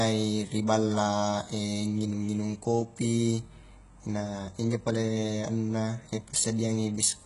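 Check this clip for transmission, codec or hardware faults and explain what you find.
One codec fault runs through the whole speech clip. HE-AAC compression, throughout: the treble above the coded low band is likely rebuilt by spectral band replication, which fits a very low bitrate around 12 kbps. Nothing sounds above 11.1 kHz, and the s sounds come out heavily gritty and metallic.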